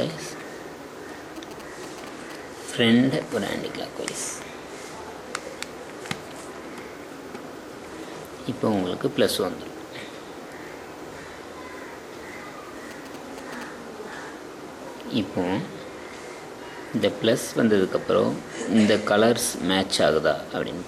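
First up, from 1.36 to 2.32 s, there's a burst of GSM signalling interference: a galloping dit-dit-dit of short buzzes at 217 Hz, sitting roughly 15 dB under the main sound. That's a nearby 2G phone doing its handshake chatter rather than a full call. The circuitry rectifies the radio pulses and lets them through as audio. The same pattern comes back from 12.91 to 13.63 s, with the same rate and a similar level.

In between, at 8.04 s, there's a single sharp click, and another at 16.37 s. Each is a tiny tick with no audible gap, so it's likely dropped samples. Only a handful went missing, a tenth of a millisecond or so, and the waveform jumps straight to a later value. That step is what you hear as the click, even though too little was lost to remove any sound.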